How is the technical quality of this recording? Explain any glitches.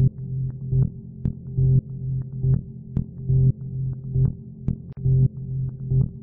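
The recording has one glitch, a gap at a join of encoded pieces at 4.93 s. For about 45 ms, until 4.97 s, the continuous sound drops to silence with edges smeared by the codec, then carries on from exactly where it stopped. That fits two separately encoded segments joined without trimming the encoder's start-up delay and final-frame padding. Because nothing is skipped or repeated, this is inserted silence rather than a dropout, where audio would go missing.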